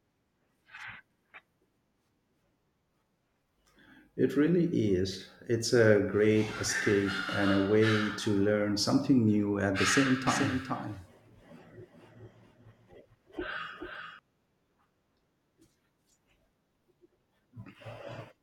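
A second copy of the signal is likely being mixed back in, either captured again through a slower path or left out of step by an edit, giving a doubled audio track from 10.27 to 14.19 s, starting just after "new at the same". The copy trails by about 400 ms at roughly 5 dB below the original, full-band and dry with no room colour, so the speech sounds stuttered and overlapped, and the echo cuts in and out abruptly.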